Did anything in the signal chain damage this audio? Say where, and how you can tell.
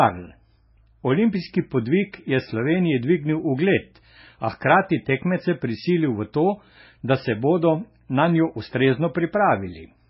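Yes, at the codec stage: the speech has nothing above 5.6 kHz and a heavy watery swirl throughout, likely MP3 compression at a very low bitrate, near 16 kbps.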